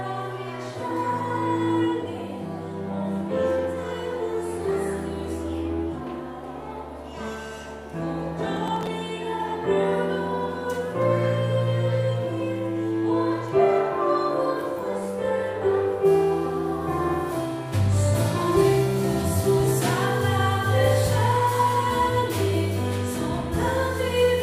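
From 8.57 to 8.87 s there is a burst of processor overload crackle. The processor repeatedly missed its deadlines on short buffers of around 5 ms. Roughly seven of them were skipped, leaving hard-edged gaps. These sound like gritty tearing over the audio.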